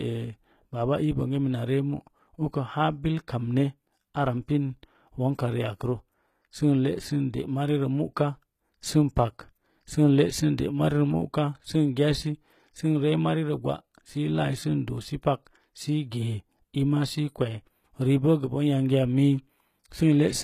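From start to finish the speech carries a treble that sounds bright yet false: s sounds come out gritty and lispy, with a metallic sheen, and nothing reaches above about 14.9 kHz. The damage is plainly audible throughout. This is likely HE-AAC compression, which codes only the lower spectrum and synthesises the top band by copying lower bands upward, so its harmonics never line up with the real ones. The heaviness points to a very low bitrate, around 20 kbps.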